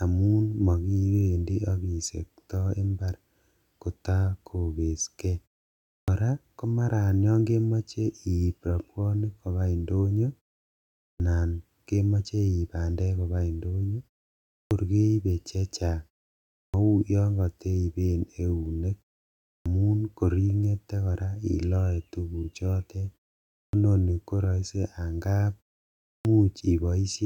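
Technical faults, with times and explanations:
5.97, 11.07, 14.6, 16.61, 19.53, 23.61 and 26.12 s, clipped start after a pause: after each gap of about half a second to 0.74 s, the output path has gone idle and needs time to wake, so the first 109 to 130 ms of speech are lost. At 16.61 s, for example, "yon kateipen eunek" begins abruptly without its opening sounds. Muted pauses only silence the gaps, whereas here speech itself is cut.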